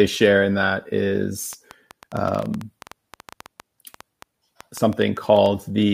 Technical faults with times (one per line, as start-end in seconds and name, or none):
1.53-5.47 train of clicks